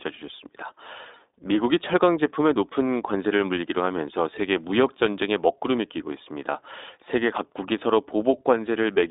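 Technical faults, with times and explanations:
Throughout, iLBC codec: narrowband speech with nothing above 3.8 kHz, plainly rough and synthetic; independently coded 20 ms frames, fitting about 15.2 kbps, distinguish it from plain band-limiting.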